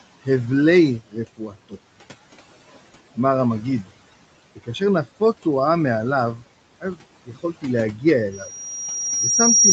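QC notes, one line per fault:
1.37 to 1.74 s, speech cut by the noise suppressor: the suppressor mistook part of the speech for noise and pulled it down, by up to about 16 dB, leaving sounds faint and swallowed.
8.31 s to the end, loudspeaker feedback squeal: the microphone hears the loudspeaker it drives, so a tone at 5.7 kHz keeps growing over roughly a second and a half, ending about 10 dB above the speech.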